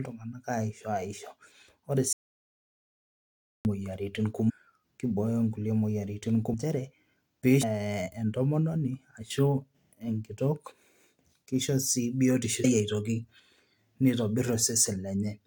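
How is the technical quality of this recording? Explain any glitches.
The recording has two kinds of glitch: one long cut to silence and four short decoding blips.

From 2.13 to 3.65 s there is an audio dropout to silence, about 1.52 s of silence with no room tone. The input was likely lost while recording continued, so that stretch of speech is simply gone. Total silence, not noise or distortion, distinguishes it from the blips.

Damaged data in a compressed stream occurs at 4.48 to 4.51 s (just before "kibooyo nkulie moyiaritin"), 6.53 s (just after "kibooyo nkulie moyiaritin"), 7.62 s and 12.63 s. Each is a brief glitch lasting around 20 ms, as the decoder misreads corrupted frames and resyncs to the next header.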